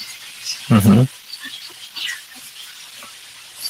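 From 0.71 to 1.02 s the speech turns harsh and crackly on its loudest peaks: microphone overload, likely from input gain driving peaks about 7 dB past the converter's limit. The waveform shows flat-topped peaks, and the spectrogram shows vertical broadband streaks.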